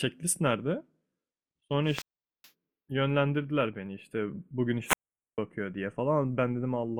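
Wireless microphone squelch dropout hits this speech clip twice, from 1.83 to 2.52 s and from 4.84 to 5.38 s. Each time the analogue FM link weakens, a short swell of hiss and static comes up, then the receiver's squelch gate mutes the output, leaving a hole of near silence of about 0.42 s in the first event and 0.45 s in the second, before the received signal recovers and the speech comes back.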